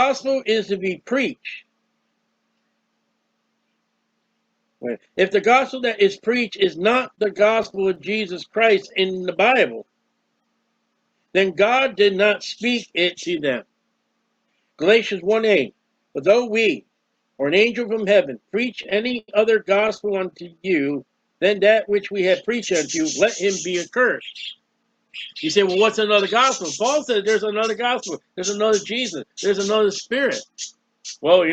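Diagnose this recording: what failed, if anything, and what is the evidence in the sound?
Network delivery into the jitter buffer is the weak point. There are repeated stalls (stutter) from 6.93 to 7.98 s, with 11 short gaps covering 124 ms, and from 18.71 to 20.00 s, with 13 gaps covering 205 ms and the longest at 93 ms. Packets arrived late, so the buffer drained and the receiver stretched the last sound across each hole. Nothing is lost, but the sound hiccups and drags.

Right after each stall comes a jitter buffer slow-down. From 8.44 to 9.26 s it runs at 94% speed and adds 59 ms. From 20.36 to 20.93 s it drops to 85% and adds 91 ms. The receiver is repeating single pitch periods to rebuild its reserve, so the sound is drawn out while the pitch stays put.

Later the buffer holds more audio than it aims for, giving a jitter buffer speed-up from 22.99 to 24.84 s at 104% and from 27.62 to 29.24 s at 106%. 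Each stretch trims roughly a tenth of a second. Too much audio piled up, so the receiver snipped out pitch-period slivers, and the sound runs faster at unchanged pitch, feeling slightly hurried in the later stretch.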